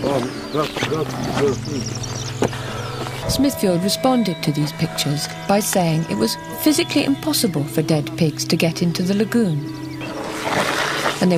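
Nothing in the audio stood out as a technical problem on listening.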